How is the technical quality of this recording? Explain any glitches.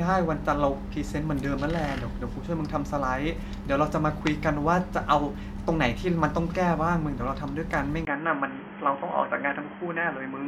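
The recording is clear until 8.05 s, when a brief gap of about 20 ms leads into a narrower, boxier sound that lasts to the end at 10.47 s. The likely cause is an input switched to a poorer device, such as a headset's call profile, which passes a narrower band. The level stays about the same, but a faint new noise floor appears far beneath the speech. That new noise, together with the gap and the change in tone, distinguishes a device change from a simple low-pass filter or codec bandwidth drop.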